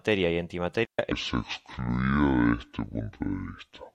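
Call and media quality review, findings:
Digital wireless dropout, 0.85 to 0.99 s: clean hole of near silence, about 138 ms, no noise burst either side. Receiver lost too much of the link and muted with a fast fade. Check RF path and antenna placement.

Section at the wrong speed, 1.12 s to end: speech slowed to 0.591x, pitch down about ten semitones, deep and dragging. Likely an editor or player running this stretch on the wrong clock. Check the sample-rate settings.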